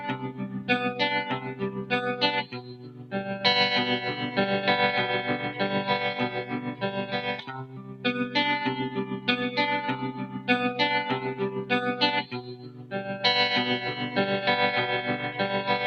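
Across the whole clip the level pumps and flutters, with held sounds and decays sinking while sudden onsets stay up, a swing of roughly 15 dB. This is a noise suppressor applied to sounds: a speech-tuned suppressor treats steady, non-speech content as noise.

Sharper dips follow where sound is cut by the noise suppressor, at 0.15–0.69 s, 1.38–3.13 s, 6.44–6.83 s, 7.42–8.05 s, 9.10–9.28 s, 10.12–10.48 s, 11.55–11.70 s and 12.23–12.93 s. Sustained material drops by about 9 to 10 dB and tails are shortened.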